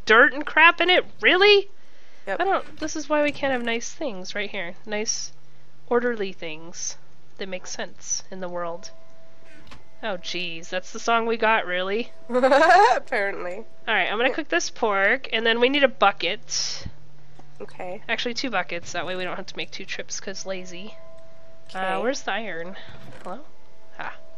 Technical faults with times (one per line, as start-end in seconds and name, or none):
2.25 damaged data in a compressed stream